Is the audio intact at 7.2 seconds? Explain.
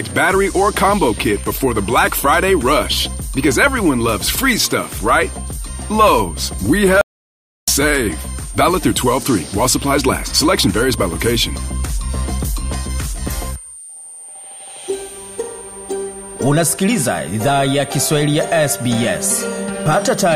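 No, 7.2 s falls inside an audio dropout to silence that runs from about 7.01 s to 7.68 s, so roughly 0.66 s of material is simply gone. The sound cuts off mid-flow and drops to silence, with no room tone or noise floor, then comes straight back. That dead-flat gap most likely means the input was lost briefly, through a disconnect, a link failure or a stray mute, while the recorder kept writing silence.

There's also a switching supply whistle running through the whole clip, and it's present on either side of the gap. It's a thin high tone drifting between about 8.85 and 8.94 kHz, sitting around 20 dB below the main signal. That's a switch-mode power supply running in an audible burst mode, or two supplies beating against each other, and it's leaking into the audio path.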